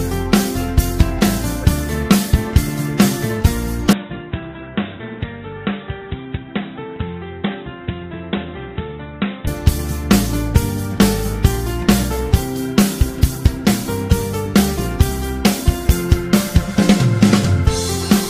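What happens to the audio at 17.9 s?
Nothing goes wrong at 17.9 s; the audio plays through that moment intact, with no fault to be heard.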